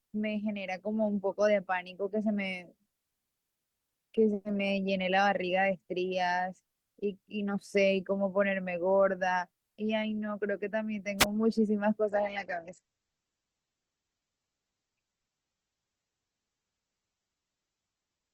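At 11.18 s the radio link of an analogue FM wireless microphone weakens until the receiver's squelch shuts the output, a wireless microphone squelch dropout lasting until 11.26 s. The failing carrier lets a short burst of hiss and static through, then the squelch cuts the signal to near silence for only about 4 ms before the voice comes back.

From 12.10 s to the end, the stream falls back to a lower-bitrate rendition, the sign of an adaptive stream at a lower bitrate switching down after the connection slowed. The change is sudden and seamless, with no gap. The treble above 8.3 kHz vanishes and the voice turns duller, with coding artefacts rising. The sound fits an Opus stream dropping from around 64 kbit/s to about 12 kbit/s.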